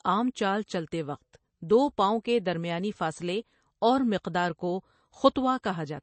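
From start to finish the speech is dull above a hard ceiling near 8.3 kHz, and the plainly audible damage below it is watery and swirling, with s sounds turning metallic and chirpy and consonant attacks smeared. The likely cause is MP3 compression at a low bitrate, around 32 kbps: short of bits, the encoder cuts the treble and lets weak frequency lines flicker on and off between frames. A simple low-pass filter would dull the sound without that flickering swirl.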